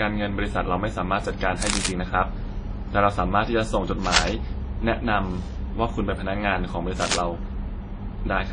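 Throughout the speech there is a mixed artefact character, consistent with transcoding between lossy codecs. The likely chain is a low-rate WMA encode followed by MP3, with artefacts suggesting roughly 32 kbit/s and then 39 kbit/s. The second encoder spends bits re-coding the first one's artefacts and adds its own. Nothing remains above 10.1 kHz, so the top is dull and the distortion sounds layered rather than uniform.

Cable scratch noise appears at 1.62–1.89 s, 4.04–4.38 s and 6.99–7.16 s. Each burst is dense, irregular crackle and rustle, about as loud as the speech, lasting between roughly a fifth and a third of a second. This is likely a worn cable, connector or control being moved, so its contact resistance jumps rapidly and injects noise until the contact settles.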